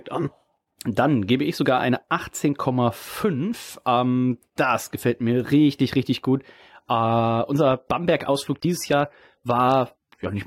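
Speech, with an adaptive stream at a lower bitrate from 6.62 s to the end. The quality drops suddenly with no gap. Treble thins, nothing sounds above 16.7 kHz, and codec artefacts rise. This fits a switch from roughly 96 to 32 kbit/s AAC.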